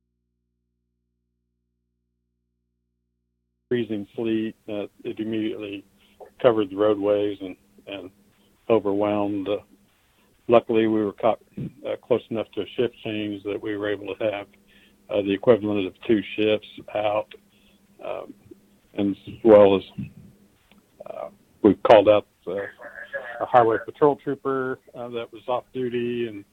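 From the very start until 3.71 s the audio is in an audio dropout to a faint residue, already under way as the clip opens. Only mains hum remains, about 55 dB below the signal, likely because the source was lost while the input stayed live. The sound then returns abruptly, not as a fade-in, and the hum rules out a deliberate pause.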